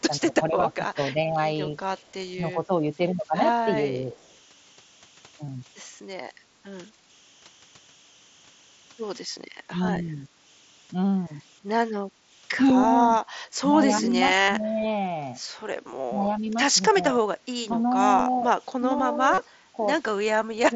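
Under the whole recording sits a faint, steady whistle near 3 kHz. It is clearest in the pauses, and beneath quiet speech it becomes a fine grainy hiss, at about 31 dB below the signal. These are converter idle tones. A delta-sigma converter running without dither settles into repeating bit patterns whenever its input is very small, and those patterns come out as a fixed pitched tone instead of smooth noise.

From 0.1 to 4.2 s the speech keeps sagging in level and losing brightness. In stretches adding up to about a second, it drops by roughly 10 dB. The same dips come back briefly between 9.7 and 10.27 s, and again in parts of the stretch from 14.03 s to the end, totalling about one and a half seconds there. This is speech suppressed in double talk, and it likely happens because both ends were talking at once. The echo canceller could not separate the near talker from the loudspeaker echo, so it turned everything down.

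From 2.07 to 2.14 s, and again from 4.23 to 4.36 s, a very faint ghost of the voice trails the original by 242 ms. This is an echo leak, likely from a far-end loudspeaker whose echo canceller left residue that was sent back down the line.

At 5.455 to 5.479 s, 14.418 to 14.482 s and 19.338 to 19.38 s the sound briefly turns into a held, buzzy repetition, with a slight warble as normal audio resumes. These gaps last 22.5, 60 and 37.5 ms. This is concealed Bluetooth headset packet loss. The receiver filled the missing frames by repeating the best-matching slice of recent waveform, and the gap lengths fit runs of a few lost mSBC frames. The mSBC link itself carries the wideband speech with only light grain.

From 6.48 to 7.06 s, and from 12.1 to 12.24 s, the room ambience sinks by about 9 to 10 dB for a moment and then recovers. This is background gated by the echo canceller, which clamped the microphone while the loudspeaker played and released it afterwards.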